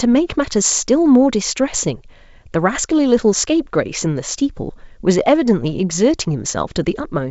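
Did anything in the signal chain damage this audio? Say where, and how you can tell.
No, nothing damaged this audio.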